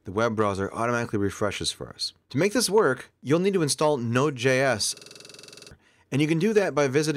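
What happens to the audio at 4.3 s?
Nothing goes wrong at 4.3 s; the audio plays through that point with no dropout, click, distortion or other audible fault.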